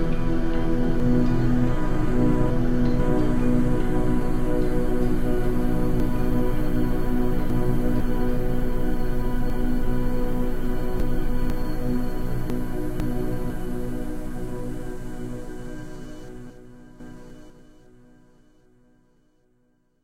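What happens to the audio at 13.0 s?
At 13.0 s the audio sits in the middle of a chunks out of order fault spanning 12.5 to 13.5 s. A half-second block of sound arrived one chunk late, so it plays after the 500 ms block that should have followed it. Nothing is missing, but the two halves are swapped, leaving hard joins at 12.5, 13.0 and 13.5 s. The result is a brief jumbled passage.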